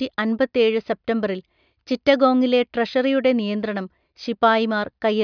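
Speech recording; no technical faults found anywhere in the clip.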